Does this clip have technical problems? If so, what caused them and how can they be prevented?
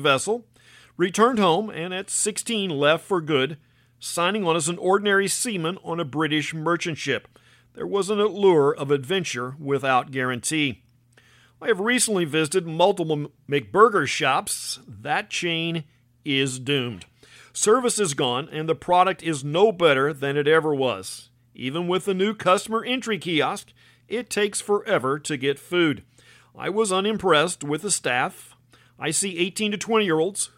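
No, nothing in this speech recording stood out as a technical problem on listening, so there is no cause to trace and nothing to prevent.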